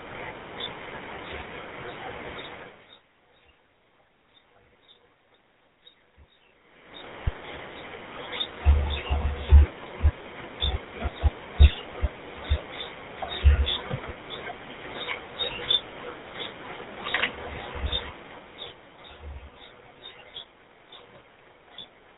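From start to finish the speech carries the roughness of the GSM full-rate codec, plainly audible, with a buzzy, gravelly grain, which fits the 13 kbps full-rate mode. The codec rebuilds the voice from a vocal-tract model driven by sparse, regularly spaced excitation pulses, so the fine detail of the voice is lost. On a spectrogram, energy stops sharply at about 3.8 kHz, and harmonics look smeared and grainy.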